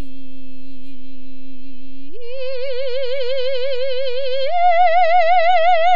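A DC offset runs through the whole music clip: the waveform sits shifted off zero by a constant amount. It cannot be heard as a tone, but it eats into headroom and shows up as steady energy at the very bottom of the spectrum.

From 0.93 s to the end, the adaptive stream switches to a lower bitrate, apparently after the connection slowed. The quality drops abruptly with no gap. Nothing remains above about 6.9 kHz, so the treble goes dull and codec artefacts grow, which fits a step from roughly 96 to 24 kbit/s AAC.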